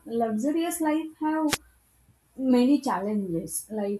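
At 1.48 s the radio link of an analogue FM wireless microphone briefly fades as reflected copies of the signal cancel at the receiver, leaving too little carrier to hold the receiver's own noise down. The result is a wireless microphone noise hit: a short swish of static lasting to 1.57 s, under a tenth of a second, that washes over the speech before the signal recovers and the hiss drops away again.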